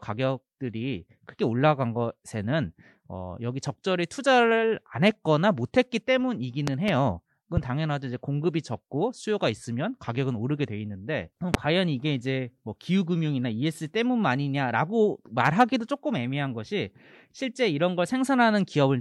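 A speech recording marred by loud pops, most likely from sudden voltage steps in the chain, such as a plug being disturbed, a switch, static discharge or a driver glitch, that the following circuitry shapes into brief pulses. They come through as sharp thumps roughly 20 dB above the speech: a double pop from 6.68 to 6.91 s, a single one about 15 dB above at 7.57 to 7.60 s, and another near 20 dB at 11.54 to 11.57 s, with the speech continuing underneath.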